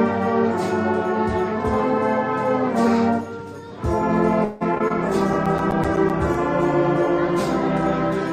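From 4.44 to 4.92 s there's a burst of repeated packet loss that gives a choppy, robotic edge. Four gaps land close together, the longest about 167 ms. The concealer stretches the last sound across most of them, so nearly half that span is patched, and a little is simply missing.

Right after, at 4.99 s, a call bitrate drop sets in and lasts to the end. The encoder falls from 96 to 17 kbps, so the sound turns coarse, watery and dull on top. It stays at its worst for about 1.4 s.

Overlapping that, from 5.20 to 6.35 s, come CD scratch ticks. These are ten short clicks or micro-dropouts, the longest about 10 ms, at close to nine a second. That's the player patching over a damaged spot that comes round once per disc turn.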